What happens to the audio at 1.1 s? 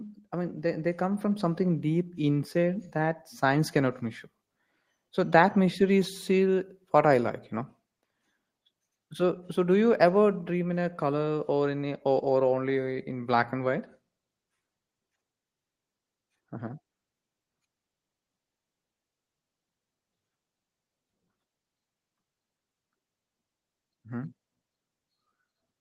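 At 1.1 s the speech is partway through an automatic gain rising, which runs from 0.29 to 3.27 s and ends just before "science cannot measure". The gain control judged the input too quiet and eased its gain up by about 5 dB, so the voice and the room noise beneath it swell together. Unlike a volume step or compressor pumping, the rise is slow and steady over roughly three seconds, with no sudden jump and no dip between syllables.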